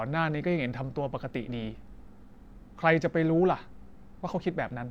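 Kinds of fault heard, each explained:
No kinds of fault are heard.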